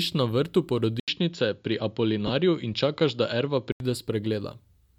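At 1.0 s, right after "na vrtu", an 80 ms gap opens and the speech turns duller and boxier until 3.8 s, with nothing above 7.2 kHz. The level holds steady, with a faint new noise floor far below the speech. This most likely comes from the input switched to a poorer, narrower-band device.

Within that stretch, at 2.27 to 2.30 s, about 22.5 ms of lost LE Audio frames, which fits three 7.5 ms LC3 frames, leaves the decoder repeating the last spectrum with scrambled phase, briefly smearing the speech into noise.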